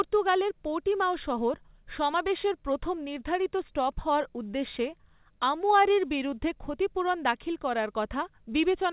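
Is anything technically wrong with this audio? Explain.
No, nothing's wrong here; it's just speech that came over a WebRTC call path using G.711 mu-law at 64 kbps, so it has that familiar phone-line quality with nothing above 4 kHz.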